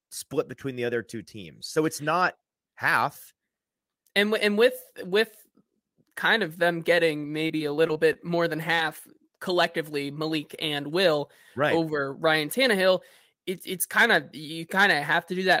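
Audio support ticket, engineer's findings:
Repeated packet loss (robotic sound), 7.47–8.17 s, between "kind of them getting" and "more than": choppy stretch with pieces missing. Jitter buffer or network path dropping packets in a burst; roughly half a dozen holes, longest 21 ms, about 120 ms lost, concealment patching around a sixth of that span.

Short concealed packet loss, 8.75–8.79 s, right after "more than": brief smear or wobble. One dropout of about 20 ms, with the decoder's concealment extending the preceding sound over about 24 ms and crossfading back. Probably the same network burst tailing off.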